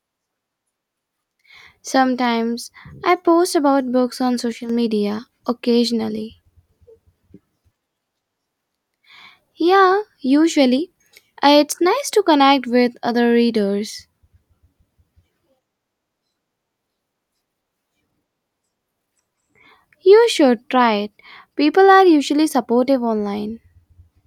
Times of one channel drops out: 4.52-4.69

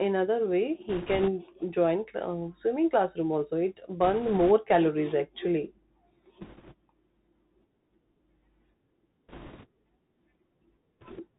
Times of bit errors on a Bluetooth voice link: 0.89-1.30, 4.04-4.51, 6.41-6.74, 9.29-9.66, 11.01-11.22

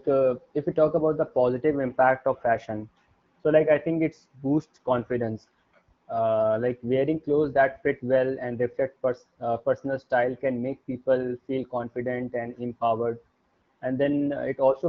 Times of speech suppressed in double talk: none

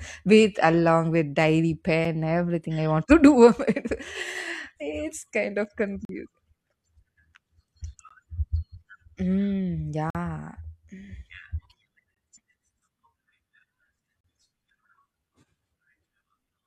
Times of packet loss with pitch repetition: none

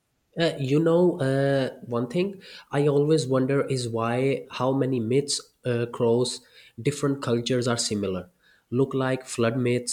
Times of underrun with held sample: none

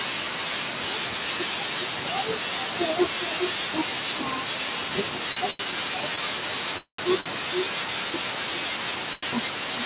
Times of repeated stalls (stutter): 5.32-6.19

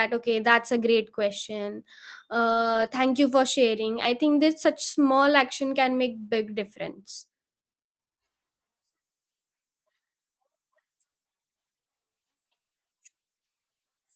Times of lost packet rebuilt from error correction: 2.49-2.87, 3.95-4.05

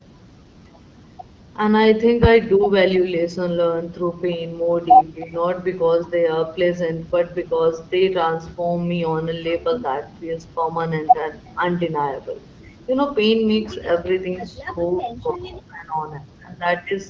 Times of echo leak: 11.46-11.50

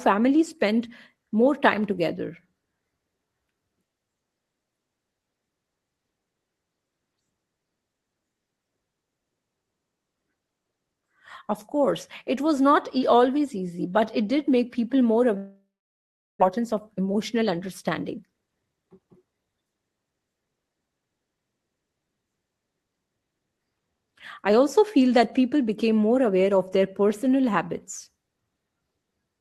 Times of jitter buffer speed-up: 16.57-20.71

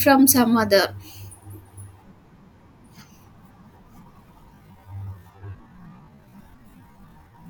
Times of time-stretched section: 4.50-7.50

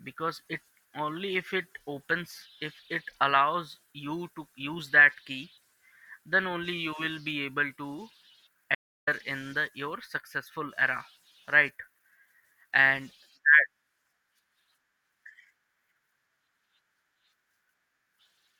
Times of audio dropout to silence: 8.75-9.07

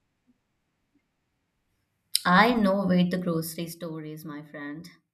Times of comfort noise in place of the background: none

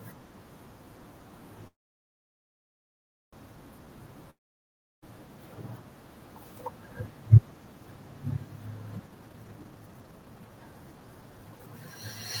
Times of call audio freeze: 1.67-3.34

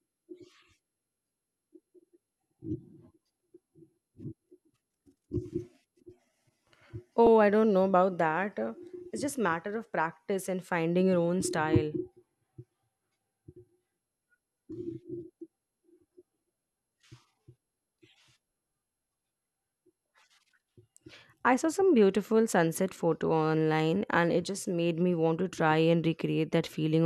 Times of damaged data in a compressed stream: 3.37-3.40, 7.26

